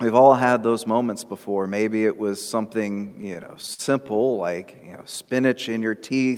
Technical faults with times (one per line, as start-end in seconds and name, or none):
2.95-4.32 repeated stalls (stutter)
5.02-5.71 jitter buffer slow-down